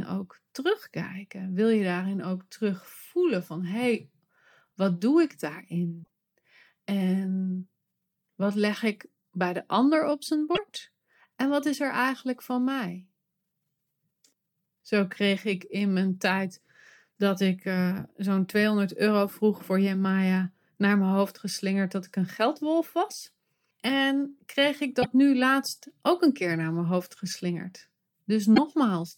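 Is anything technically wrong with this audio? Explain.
Yes, there's damaged data in the compressed stream, heard as four short glitches, each a chirp, squawk, click or brief hole: 6.00 to 6.06 s, 10.52 to 10.59 s right after "de ander op zijn", 24.99 to 25.06 s between "kreeg ik" and "nu laatst ook een", and 28.51 to 28.58 s. Each time, corrupt bytes make the decoder misread frames and hunt for the next valid header.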